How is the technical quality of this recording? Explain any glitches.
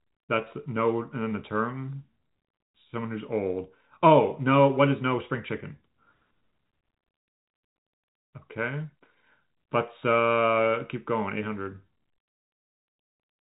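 No glitches turn up in this recording: the speech comes through G.711 telephone coding working as intended, with the usual telephone band limit leaving nothing above about 3.8 kHz.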